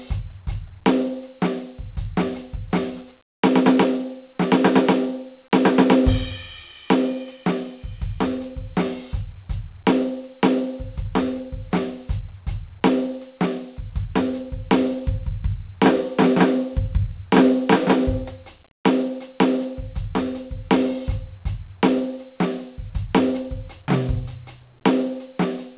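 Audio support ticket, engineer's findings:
No faults found in the music clip; the call path is working as expected, with no content above 4 kHz, which fits a 64 kbps G.711 mu-law narrowband codec.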